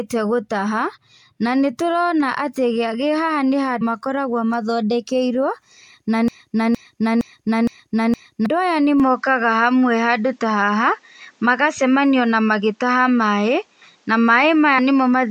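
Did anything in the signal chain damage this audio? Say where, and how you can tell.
Yes. Compressed frames skipped at 3.80 s and 14.78 s. Roughly 150 ms, then 70 ms, vanish in 26.1 ms steps: codec or storage.

A broken-record loop runs from 6.28 s to 8.46 s. A 0.46 s fragment repeats five times. The stream or player likely stalled, resending its last buffer.

Input switched to a poorer device at 9.00 s. From there, nothing above 8.3 kHz. A noise floor about 45 dB down appears. The likely cause is a changed input device.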